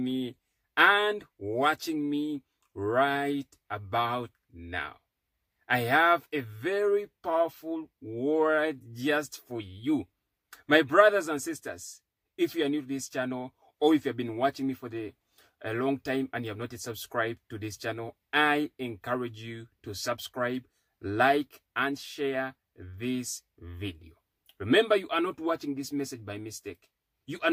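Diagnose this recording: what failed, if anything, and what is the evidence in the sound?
Nothing failed: no stage in the chain, from analogue wiring through conversion, processing and playback, leaves any audible fault in this recording.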